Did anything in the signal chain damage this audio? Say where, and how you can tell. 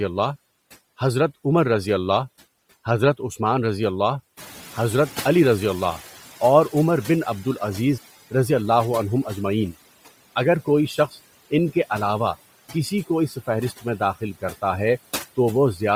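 Yes. In the call-processing stage, noise suppressor artifacts run through the whole clip. Steady background noise is pulled down by about 15 dB between phrases and swells back under the speech.

At the codec stage, the upper spectrum is grainy and breathy throughout, with hissy noise standing in for real high-frequency detail. That points to heavy transform-codec damage, likely from Bluetooth LC3 compression at a low bitrate in 10 ms frames.

Noise suppressor catching up: the room noise jumps by about 13 dB near 4.5 s. From 4.37 to 8.0 s it passes through under-reduced, then sinks by about 12 dB as the suppressor's noise estimate adapts over roughly 3.6 s.

Speech cut by the noise suppressor: from 13.29 to 13.48 s, part of the speech is treated as noise and dips by up to about 10 dB. Roughly a tenth of a second sounds swallowed as the suppressor's gain clamps down on it.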